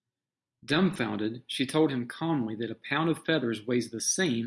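Nothing stood out as a technical fault on listening to this speech recording.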